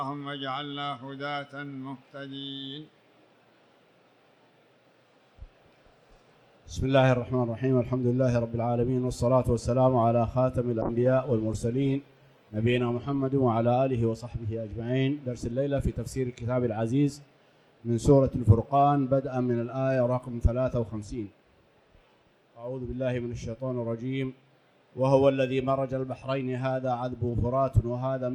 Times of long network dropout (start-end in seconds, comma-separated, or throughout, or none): none